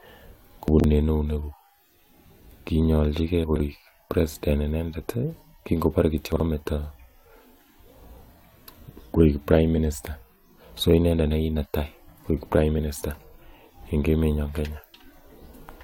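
Chunks out of order at 0.68 to 0.84 s, 3.44 to 3.6 s and 6.32 to 6.4 s: 40 ms pieces played late, producing jumbled stumbles in the speech. DAB burbling at 11.28 s: residual bit errors corrupted the broadcast audio's sub-band data, giving brief blips of noise.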